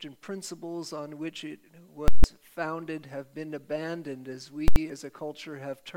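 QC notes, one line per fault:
2.08–2.24 s and 4.68–4.76 s, invalid numbers at full scale: a calculation produced infinite or invalid values that were clamped to the extreme positive or negative sample value, pinning the output flat at one extreme, far beyond the audio's peaks, for 160 ms and then 80 ms. The jumps onto and off the rail give a very loud pop at each edge with nothing in between. The 2.08 s block is a pop, a dead gap, then another pop. At 4.68 s the edges crowd into a near-single bang.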